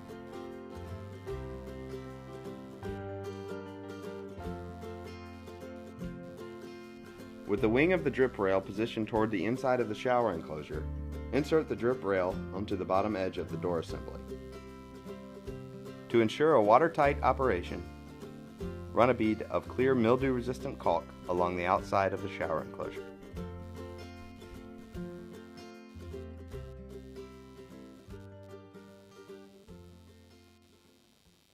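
A faint buzzing, pulsing roughly a hundred times a second and sitting far below the sound, runs through the whole clip. This is computer activity noise: load changes in the machine's processor or peripherals disturb the shared ground feeding the audio circuit.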